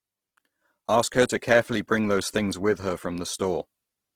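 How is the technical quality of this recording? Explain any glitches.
The recording has plainly audible codec damage throughout. For the full clip, the speech shows the marks of Opus compression, likely in its CELT music mode at a low bitrate that fits about 16 kbps. Short of bits, the encoder keeps each band's energy but fills the detail by folding lower bands or inserting noise. The bandwidth stays wide, but the speech comes out rough, grainy and noisy.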